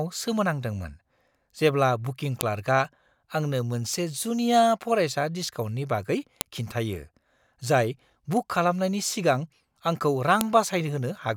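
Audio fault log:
2.41 s, 6.41 s, 10.41 s: file header played as audio. A sharp, loud snap lands at each of these points, exactly 4.0 s apart, because the start of each joined piece carries a few dozen header bytes that get read as samples. Unlike dropout or edit clicks, these arrive on a fixed 4 s grid regardless of what the speech is doing at that instant, and each is a single brief burst rather than a gap or level jump.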